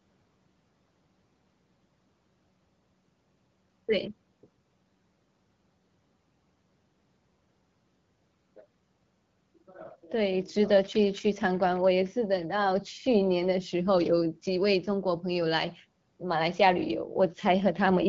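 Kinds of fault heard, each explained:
No faults detected in this speech recording.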